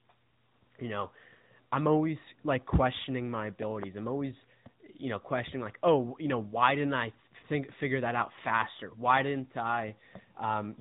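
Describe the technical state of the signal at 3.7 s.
At 3.7 s a loud pop occurs: two sharp pops between 3.63 and 3.85 s, just after "always like questioning my" and before "I'm always you know", peaking roughly 10 dB above the speech. The likely cause is a voltage spike, such as static or a switch transient, added to the line. Unlike a dropout or a codec glitch, the speech continues unbroken beneath the pops. Throughout, including this moment, the AMR narrowband mobile codec leaves nothing above 3.8 kHz and gives the voice a buzzy, synthetic edge, which fits a mid-rate mode of about 10 kbps. This is codec damage rather than simple low-pass filtering.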